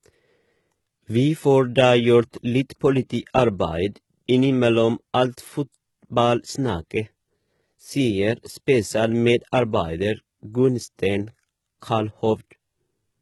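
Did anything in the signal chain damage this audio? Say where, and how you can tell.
Yes. HE-AAC compression affects the speech throughout, and the damage sits at the codec stage. The treble above the crossover sounds bright but synthetic: s sounds come out gritty and lispy, with a metallic sheen that doesn't track the harmonics below. That is spectral band replication, which copies lower bands upward under a coarse envelope instead of coding the real highs. The damage is heavy, likely from a very low bitrate in the range of 16 kbps.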